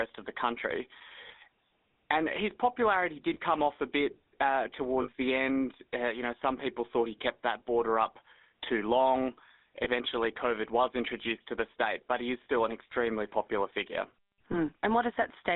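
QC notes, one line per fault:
throughout, GSM full-rate codec: The speech has a buzzy, gravelly roughness and a narrow, boxy tone, with nothing below 200 Hz or above 3.7 kHz. The coder rebuilds the vocal tract from a coarse, regularly spaced pulse excitation, losing fine detail. This fits a 13 kbps full-rate stream.
1.28–1.32 s, 3.34–3.38 s, 5.02–5.09 s, 9.84–9.87 s, 12.44–12.46 s, 14.52–14.58 s, lost GSM frames: The sound briefly freezes into a rough metallic ring, longest at 5.02 s. The decoder repeats the last good frame's settings. Most gaps point to a single 20 ms frame; the one at 5.02 s suggests about 60 ms.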